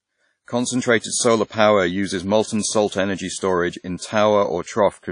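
From start to finish the speech carries plainly audible codec damage. Everything above about 10.1 kHz is simply gone, and what's left has a ringing, washy edge with a hiss that swells and fades along with the voice, since the quantisation noise gets smeared over long transform blocks and the weaker detail is dropped outright. That's most likely WMA compression, and the heavy loss fits an early WMA encoder at around 32 kbps.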